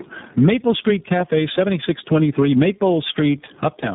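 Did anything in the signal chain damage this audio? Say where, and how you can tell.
Yes. There's gain pumping throughout, a swing of around 15 dB, so everything sounds squashed and evenly loud. That's likely a call-processing stage running hot gain into a fast limiter or compressor.

Tandem speech coding is the other problem, at the codec stage. The whole clip is rough, muffled and warbly, with nothing above 3.8 kHz. It points to three speech coders in a row, G.726, AMR-NB, then iLBC, each re-encoding the previous one's degraded output.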